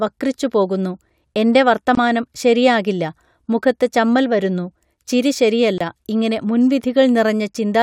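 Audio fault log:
1.95 s and 5.78 s: block of digital silence. After "വക്രിച്ചുപോകുന്നു എൻറെ" and before "ശരിയാകില്ല മുഖത്ത് ചമ്മൽ വരുന്നു", and again after "മുഖത്ത് ചമ്മൽ വരുന്നു ചിരി", the speech drops to silence for about 23 ms each time, which fits a 1024-sample buffer left unfilled. The waveform jumps straight to silence and back with no fade, so each gap is heard as a brief hole.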